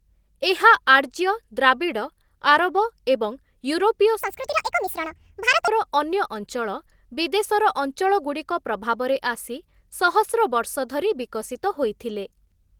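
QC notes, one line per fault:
4.21–5.68 s, section at the wrong speed: speech runs 1.65 times fast, pitch rising about ten semitones with tempo, unlike a pitch shift; likely a playback clock mismatch.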